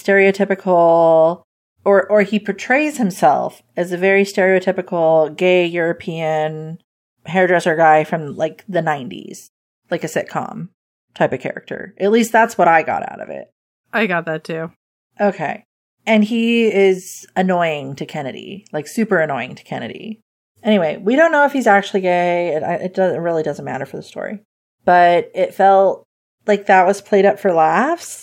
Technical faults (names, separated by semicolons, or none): none